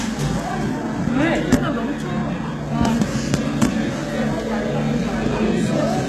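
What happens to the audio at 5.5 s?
At 5.5 s the audio carries the same damage heard across the whole clip: HE-AAC compression, most likely at a low bitrate around 16 kbps. The lower spectrum is coded directly, while the treble is rebuilt by copying lower bands upward under a coarse envelope, so its harmonics do not line up with those below. Bright, sharp detail therefore sounds gritty and metallic, and nothing sits above 12.3 kHz. Unlike a plain low-pass filter or low-bitrate MP3, the top end is not dull but present yet synthetic.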